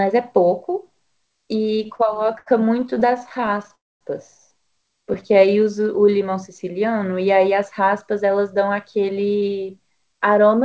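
Speech that has come through a wideband call path, with nothing above 8 kHz, which fits G.722, and it shows four jitter-buffer faults. From 1.68 to 3.71 s there are repeated stalls (stutter): 29 brief gaps, the longest 80 ms, each bridged by stretching the last sound, 367 ms in all, or 18% of that span. Packets kept arriving behind playback, so the speech drags and hiccups. On a spectrogram this shows as many short smeared, flattened blocks interrupting the harmonic patterns. From 3.75 to 4.03 s comes a call audio freeze. The sound holds briefly, then drops to silence for 240 ms before resuming where it stopped, adding about 257 ms of delay with nothing lost. The likely cause is held-up packets emptying the jitter buffer. The waveform shows a short tail and then a flat gap. From 5.03 to 6.19 s a jitter buffer slow-down plays the audio at 91% speed with unchanged pitch, repeating single pitch periods to rebuild the reserve and adding 106 ms. 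Sounds are audibly drawn out, and the spectrogram shows stretched, slightly repetitive harmonic bands. From 8.14 to 10.64 s a jitter buffer speed-up does the reverse, running at 109% with pitch intact and cutting about a fifth of a second in tiny pitch-period pieces to shed excess delay. The speech sounds hurried, and the spectrogram shows compressed syllables.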